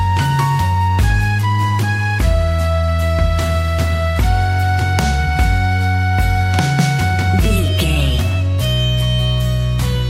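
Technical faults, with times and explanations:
No technical faults, with times or otherwise, turn up anywhere in this clip.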